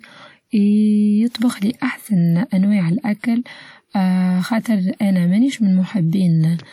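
A transform codec has spread its quantisation noise across whole blocks, so noise meant for sharp speech onsets leaks into the quiet just ahead of them. This pre-echo appears at 1.38 to 1.42 s, a hiss about 36 ms long just before "لي أحسن أنواع", and again at 3.19 to 3.23 s, about 45 ms, right after "لي أحسن أنواع". Each time the onset arrives softened and smeared, with a breathy rush in front of it.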